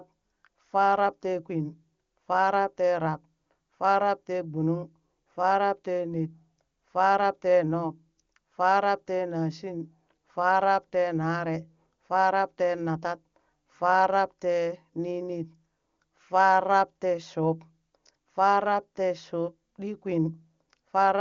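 Speech, with no technical fault to report. It carries the audible character of AMR wideband (HD Voice) coding, with a band limit near 7 kHz and at most faint coding texture, which fits the codec's highest rate of 23.85 kbit/s.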